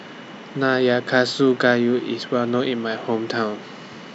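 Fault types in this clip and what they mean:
No faults are audible anywhere in this speech.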